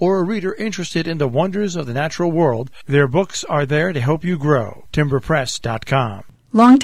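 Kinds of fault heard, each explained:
No kinds of fault are heard in this audio.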